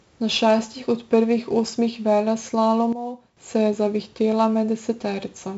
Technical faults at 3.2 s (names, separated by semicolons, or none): 4-bit ADPCM compression; sudden gain jump